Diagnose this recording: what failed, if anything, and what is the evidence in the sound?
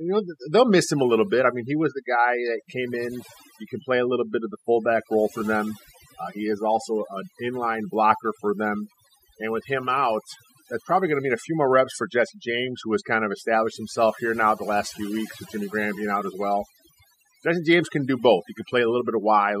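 Overdone noise removal is what failed here, and it sits at the call processing stage: a noise suppressor run far too hard over a noisy speech recording, audible for the whole clip. Between phrases the background drops to near silence, speckled with little twinkling tones where stray bands poke through. The suppressor pulls down any band that sits close to its noise estimate, and the quieter parts of the speech get caught too.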